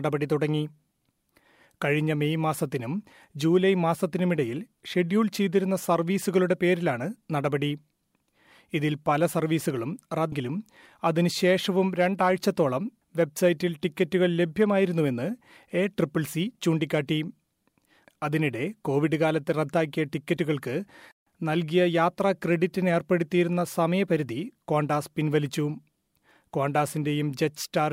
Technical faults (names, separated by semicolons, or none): damaged data in a compressed stream